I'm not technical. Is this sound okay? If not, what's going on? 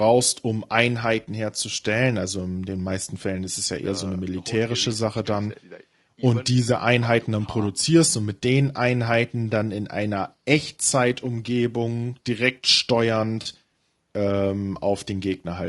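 No. The whole clip sounds rough and grainy, with a dull top end. This is likely low-delay AAC compression, the kind used on video calls.

At 13.41 to 13.47 s there is AAC frame loss with concealment. About 40 ms went missing, and the player patched it with a brief smeared, noisy blip.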